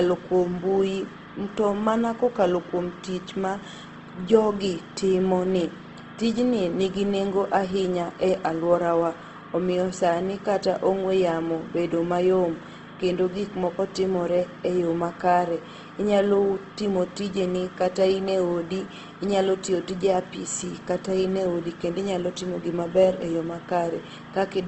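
From start to finish the speech shows plainly audible Opus compression damage, likely from a low-rate encode in its CELT music mode. Nothing reaches above 8.2 kHz, and starved bands are refilled with folded or noise content, leaving the voice rough and grainy, consistent with about 16 kbps.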